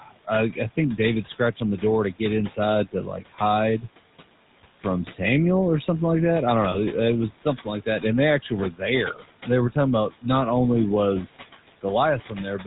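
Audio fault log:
Throughout: noise suppressor artifacts. The background is pulled down by about 17 dB between phrases and swells back under the speech, following the band-by-band gain changes.
Throughout: GSM full-rate codec. There's that familiar buzzy, gravelly roughness of the old GSM coder, plainly audible, which fits a 13 kbps full-rate stream. Nothing comes through above 4 kHz, and the pulse-driven excitation gives the voice its coarse, grainy texture.
0.00 to 1.82 s: speech cut by the noise suppressor. Before "to get" the suppressor mistakes parts of the speech for noise and ducks them by as much as about 17 dB, a bit under half a second in total, so soft consonants and word endings come out swallowed and faint.
6.72 to 6.77 s: lost GSM frames. Right after "like that I don't" there's a brief rough, metallic ring lasting about 20 ms, which points to a single dropped frame. The decoder simply repeats the last good frame's settings to cover the gap.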